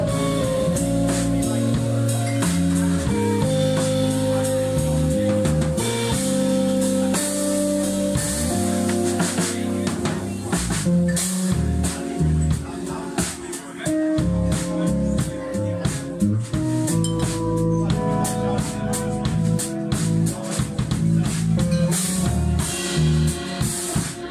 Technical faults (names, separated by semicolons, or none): none